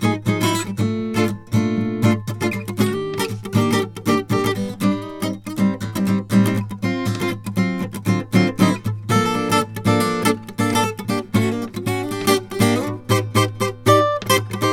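No technical faults can be heard anywhere in this music.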